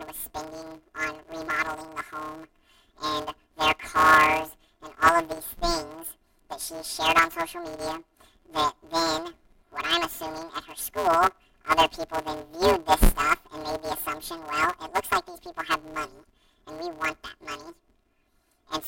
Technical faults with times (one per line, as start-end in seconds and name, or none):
0.00-18.87 planar audio read as interleaved